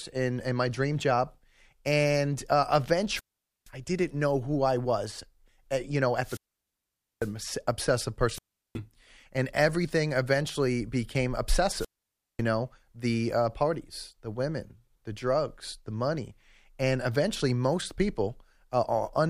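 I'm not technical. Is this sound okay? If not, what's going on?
No. The speech cuts out four times, at 3.09, 6.20, 8.31 and 11.76 seconds. This is wireless microphone squelch dropout. The radio signal weakens, the receiver mutes itself, and you hear silent gaps of 0.37 to 0.85 seconds.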